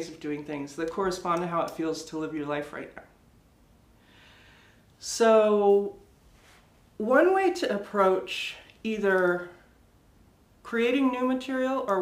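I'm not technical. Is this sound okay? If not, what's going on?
No. From about 5.70 seconds until the end, there is a fault called sample clock jitter. The device that turned the sound into digital form has an unsteady internal clock. It takes its measurements a few millionths of a second too early or too late, at random. Those timing slips turn into small errors. You hear them as a faint hiss or roughness riding on the sound. It gets stronger when the sound is loud or bright.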